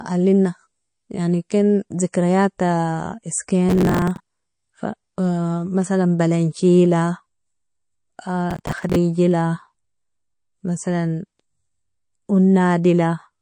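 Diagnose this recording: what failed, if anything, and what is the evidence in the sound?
MP3 compression runs through the whole speech clip, a codec-stage fault. The sound turns watery and swirly, with chirpy sibilants and smeared onsets, the likely result of a low bitrate around 40 kbps zeroing weak frequency lines frame to frame.

Processor overload crackle, a driver or buffer fault, hits from 3.69 to 4.72 s and again from 8.51 to 8.96 s. Gritty tearing rides on the speech as dozens of short buffers, around 10 ms each, miss their deadlines and replay stale audio with hard edges.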